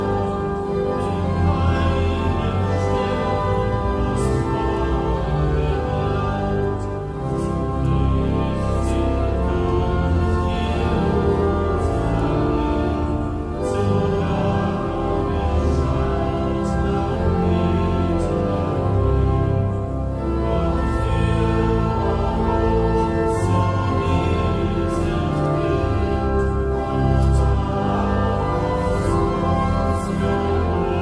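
No technical faults can be heard anywhere in the audio.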